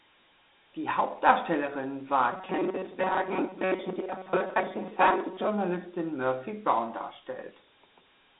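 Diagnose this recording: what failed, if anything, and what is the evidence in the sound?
The codec stage failed audibly for the whole clip: the speech carries the gritty hiss of Dialogic VOX ADPCM, which fits 4-bit coding at about 32 kbps. The band runs from roughly 250 Hz to 3.7 kHz, and a spectrogram would show nothing above 3.9 kHz, with a hard ceiling. The coarse 4-bit step sizes leave quantisation noise riding on every syllable, so the waveform looks fuzzy rather than clean between peaks.

From 2.33 s to 5.48 s the speech turns into a rigid, metallic buzz at 188 Hz that still roughly follows the words. This is robotic sound from repeated short buffers, most likely in the driver or buffer stage. When fresh audio arrives too late, the last chunk of about 5.3 ms is replayed, and roughly half the material is repeats. On a spectrogram this appears as evenly spaced harmonics of 188 Hz. 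The waveform shows identical short segments stamped end to end.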